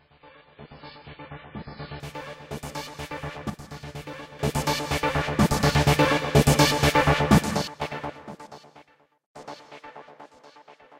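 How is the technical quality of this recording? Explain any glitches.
The recording has three glitches: a reduced-quality opening and two brief level drops.

From 0 to 2.0 s the audio is an adaptive stream starting at a low bitrate. Nothing sounds above 5.2 kHz and codec artefacts are heavy, which fits a 16 kbit/s MP3 start. At 2.0 s the player switches to a higher-quality version, consistent with 128 kbit/s, and the treble returns abruptly with no gap.

From 3.50 to 4.39 s, and again from 7.68 to 7.81 s, there is a sudden gain jump. The sound and its background noise drop together by about 9 dB, then about 12 dB, and recover just as abruptly. The likely cause is a digital gain change applied instantly rather than ramped.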